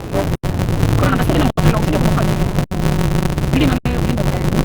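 A recording of everyday sounds with a block size mismatch (truncated) throughout: a steady 188 Hz buzz runs under everything, and events play 1.88 times too fast at roughly normal pitch. This fits a stage reading 256-sample blocks from longer ones and discarding each block's tail. Gaps at a join of encoded pieces open at 0.35–0.43 s, 1.50–1.57 s, 2.64–2.71 s and 3.78–3.85 s. These are abrupt silences with smeared edges, after which the sound resumes where it stopped, caused by separately encoded pieces joined without trimming encoder delay and final-frame padding.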